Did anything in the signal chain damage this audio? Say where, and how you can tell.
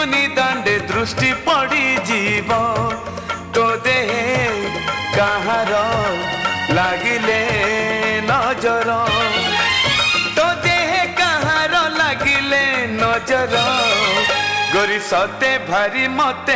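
No, nothing in the signal chain damaged this audio; it went over a WebRTC call path with G.722, whose intended band limit leaves nothing above 8 kHz.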